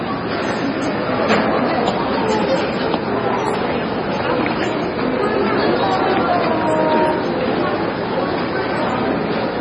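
MP3 compression runs throughout: nothing remains above 10.4 kHz, and weak detail flickers in and out with a watery swirl, likely from a very low bitrate near 24 kbps.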